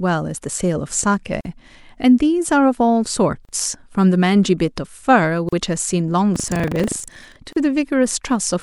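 At 1.41 s a gap at a join of encoded pieces cuts into the speech: a gap of about 43 ms with smeared edges, after which the sound resumes where it stopped. The same gap returns every 2.0 s, at 3.45 s, 5.49 s and 7.53 s, each about 38 ms long. The regular spacing fits separately encoded 2-second segments joined without trimming the encoder's leading delay and final-frame padding.

From 6.32 s to 7.37 s buffer tearing adds a robotic buzz at 25 Hz, which fits a buffer period of about 40 ms. The writing and reading positions in the ring buffer have drifted into each other, so in every period roughly a tenth of the audio is stale material from about 70 ms earlier, spliced in with hard joins on both sides. The rattle follows the speech and stops when the signal stops.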